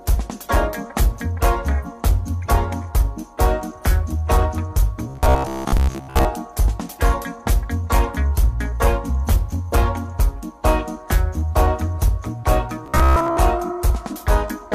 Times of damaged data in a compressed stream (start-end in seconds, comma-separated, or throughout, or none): 1.81-1.86